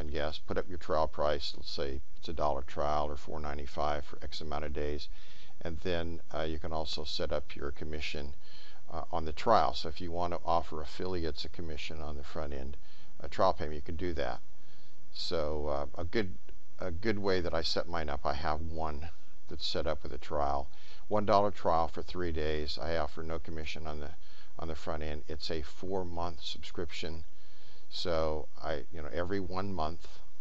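No technical faults are audible anywhere in the recording.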